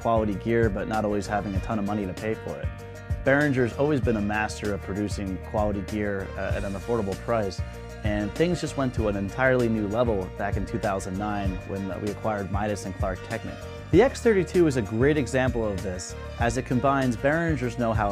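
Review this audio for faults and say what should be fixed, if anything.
Nothing here needs fixing, as no faults turn up anywhere in the recording.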